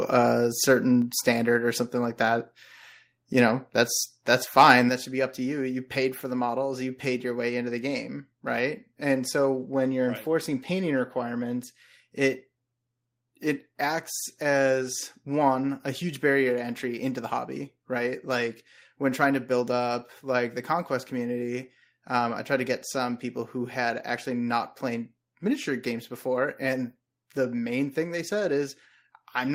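At 4.89 s the speech and its background fall together by about 5 dB in a single step, a microphone volume stepped down, likely the call software cutting the input gain. On a waveform the envelope shrinks abruptly; a spectrogram shows every band dimming at once.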